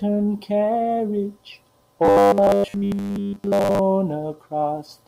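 From 2.05 to 3.79 s, the playback likely ran short of fresh audio and kept refilling the gap by replaying a tiny slice, which fits a 10 ms buffer, while the real speech was skipped; most of that stretch is repeated material. This is robotic sound from repeated short buffers: the constant recycling stamps a fixed 100 Hz buzz onto the speech, so it becomes a stiff, metallic drone that only loosely tracks the speech.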